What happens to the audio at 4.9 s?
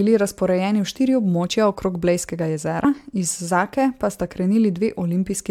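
Nothing goes wrong at 4.9 s; the speech carries on intact through that moment, with no dropout, click or other fault.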